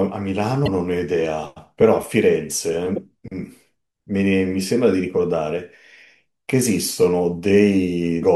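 Damaged data in a compressed stream, at 0.64 to 0.68 s, 2.96 to 2.98 s and 8.20 to 8.24 s: corrupted bytes make the decoder lose sync, producing brief chirps or blips in the speech.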